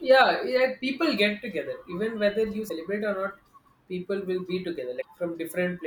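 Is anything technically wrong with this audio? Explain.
Yes, there's damaged data in a compressed stream in this speech, at 2.65–2.71 s and again at 4.98–5.05 s. Corrupted bytes there throw the decoder off, so it loses frame sync and hunts for the next header, leaving a short glitch of roughly 60 ms each time.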